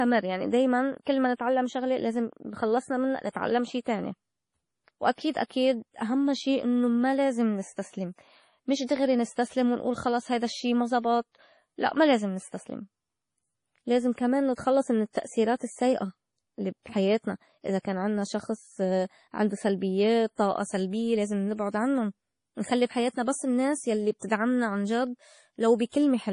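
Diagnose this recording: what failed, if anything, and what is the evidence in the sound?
Codec stage. Throughout, the speech sounds watery and swirly, with dull treble and chirpy s sounds. Likely MP3 compression, starved of bits near 32 kbps.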